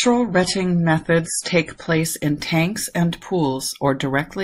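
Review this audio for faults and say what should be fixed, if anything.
The speech opens on an adaptive stream starting at a low bitrate. From 0.0 to 2.0 s the treble is dull. Nothing reaches above 11.5 kHz, and codec artefacts are strong. This fits roughly a 32 kbit/s MP3. The player began on a cheap version to start fast, then switched up once it had measured the connection. Quality jumps at 2.0 s, just before "in tanks and", with no gap. It now sounds like about 128 kbit/s. To prevent it, start on a higher-bitrate version.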